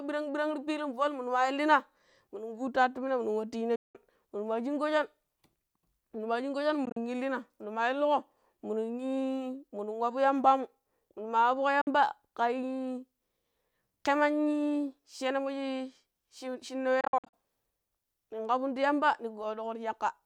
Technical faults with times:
3.75-3.95 Bluetooth dropout
6.85-6.97 Bluetooth dropout
11.81-11.87 Bluetooth dropout
17.01-17.34 Bluetooth dropout

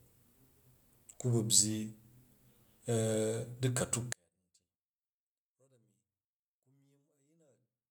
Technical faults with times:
4.13-7.90 one channel inverted

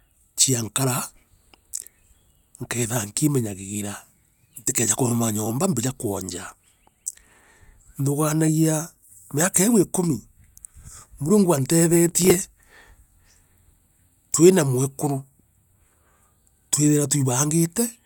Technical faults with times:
12.09-12.82 processor overload crackle

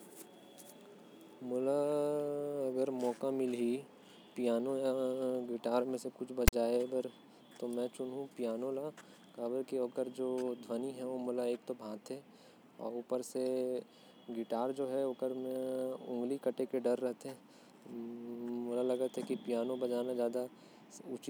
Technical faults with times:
6.48-6.53 file tags played as audio

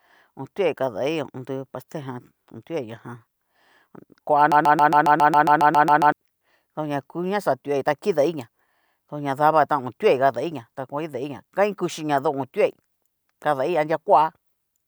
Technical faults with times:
4.52-6.12 broken-record loop

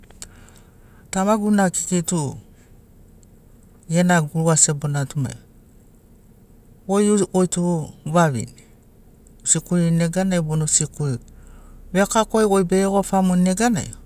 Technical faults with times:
none

